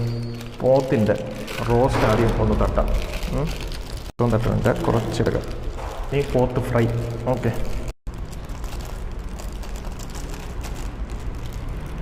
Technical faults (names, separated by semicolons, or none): corrupt frame decoded